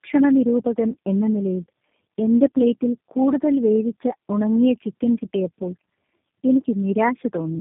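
Throughout, tandem speech coding: the speech sounds like three speech codecs in a row, each re-coding degraded output, leaving it rough, muffled and warbly, with nothing above 3.6 kHz.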